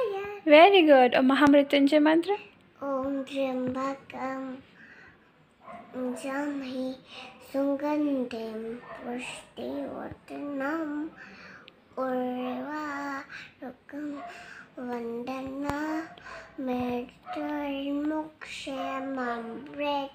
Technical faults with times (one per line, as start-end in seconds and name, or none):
1.47-1.50 loud pop
15.70-15.72 loud pop